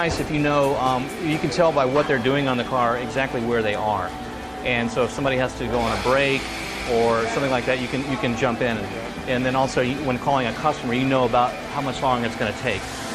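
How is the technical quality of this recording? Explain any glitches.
No technical faults are audible.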